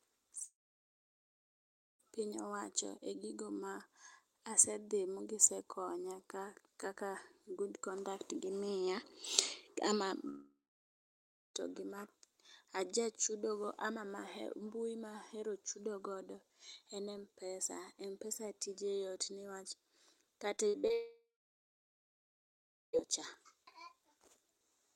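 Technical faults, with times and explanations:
0.43–2.01 s, long network dropout: A likely stall in the network stream meant about 1.56 s of speech never arrived. The receiver stretched the last sound into a brief fading buzz, then about 1.48 s of silence, and speech resumes with that stretch missing.
10.29–11.56 s, long network dropout: Here the likely cause is again an interruption in delivery, losing about 1.26 s of speech. Concealment carries the last sound for roughly a quarter second before it dies away, leaving about 1.02 s of silence until speech returns mid-flow.
20.56–20.91 s, repeated packet loss (robotic sound): Packets went missing four times in quick succession, the longest hole 58 ms. Each was patched by repeating the preceding sound, so 38% of this short span is filled-in audio, giving choppy speech with small pieces lost.
20.93–22.95 s, long network dropout: Immediately after the choppy patch, a likely complete break in the stream cost about 2.0 s of speech. 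A fading buzz of about 0.3 s gives way to around 1.71 s of silence before speech picks up again without the lost part.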